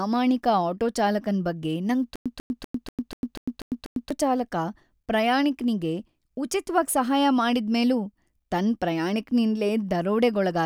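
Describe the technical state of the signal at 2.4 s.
At 2.4 s the speech is in a stutter with silent gaps, running from 2.16 to 4.11 s. Just after "ಆಟೋ ಚಾಲಕನ್ ಬಗ್ಗೆ ನಂಗ್", a 143 ms fragment repeats eight times, each followed by about 100 ms of digital silence, every 244 ms. A stalled stream likely kept replaying its last fragment. Playback resumes at "ಚಾಲಕ ಪ್ರಾಯಾಣಿಕ್ನಿಗೆ ಉಚಿತ್ವಾಗಿ ಸಹಾಯ", and the audio that should have played in between is lost.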